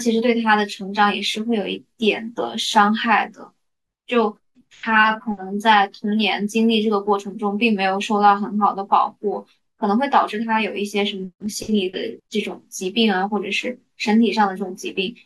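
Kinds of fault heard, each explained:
Damaged data in a compressed stream: a brief corruption of the encoded speech data, where some bytes no longer form valid frames. The decoder cannot interpret that stretch correctly, loses frame synchronisation and has to search for the next valid header before it resumes normal output. In this clip it shows as a single very short glitch at about 2.37 s, lasting about 16 ms, with the signal continuing cleanly once sync is regained.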